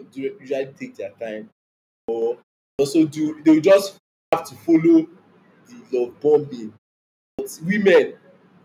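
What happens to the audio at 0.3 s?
Nothing goes wrong at 0.3 s; the speech plays through intact at that point.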